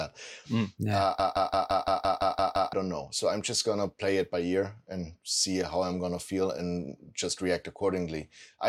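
From 1.20 to 2.73 s, a system hang loop replays one 171 ms slice of speech nine times. It is a machine-gun stutter at 5.86 Hz that costs about a second and a half of audio. Unlike a dropout's silence, the exactly identical repeats fit an 8192-sample ring buffer cycling during a freeze.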